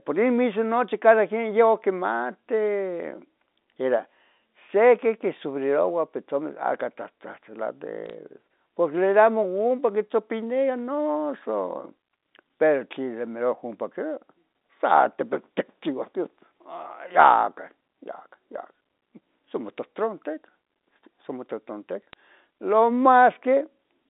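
At 8.06 to 8.13 s, bit errors on a digital phone line add a brief crackle over the speech. A second tick lands at 22.13 s. Flipped bits in the telephone-band G.711 stream corrupt single samples, giving sharp clicks.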